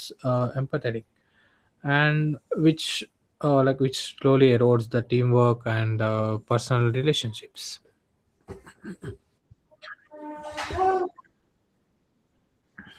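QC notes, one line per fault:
Throughout: Opus voice compression. The speech sounds hoarse and slightly robotic, with a grainy, coarsely coded excitation under the voice. The band stays full, so the dullness isn't a simple low-pass cut. The top is thin and smeared, as in hybrid coding, where a linear-prediction coder handles the range below 8 kHz and a sparse transform layer fills in above it. The damage fits a bitrate around 16 kbps with 20 ms frames.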